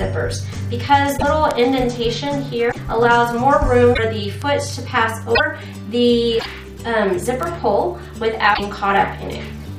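Six short disruptions, at 1.16–1.23 s, 2.71–2.77 s, 3.93–3.99 s, 5.34–5.40 s, 6.39–6.46 s and 8.53–8.60 s, are most likely a broken MP3 bit reservoir. Each lasts about 56–70 ms, roughly two to three MP3 frames of 26.1 ms. After a cut, the decoder reaches back for reservoir data, finds bytes belonging to a different frame, and turns them into a brief chirp, noise burst or short hole while the audio jumps ahead. On a spectrogram these look like short, smeared blocks of broadband or swept energy that break the surrounding texture. On the waveform they appear as a sudden, unrelated patch of samples. Three separate ticks at 1.51 s, 4.42 s and 7.43 s are bit error spikes. In each, a flipped bit throws one sample, or a few in a row, off by a power of two before the signal snaps back, giving a single sharp click that has nothing to do with the audio. The waveform shows a needle-thin spike, and the spectrogram shows a hairline vertical stripe through every frequency band.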